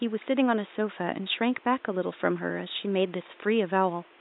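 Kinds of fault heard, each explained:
No system faults are audible; the only background is the room's own ambient level, sitting about 29 dB below the speech.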